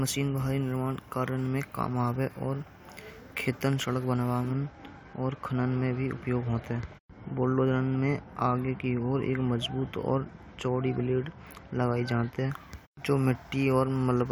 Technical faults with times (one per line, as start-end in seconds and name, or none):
4.51-12.51 de-emphasis applied wrongly